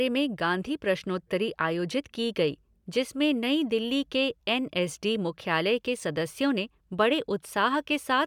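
Speech recording with no technical faults to report.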